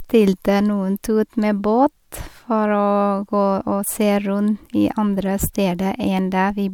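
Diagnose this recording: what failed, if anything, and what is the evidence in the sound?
Nothing failed; no stage shows any audible fault.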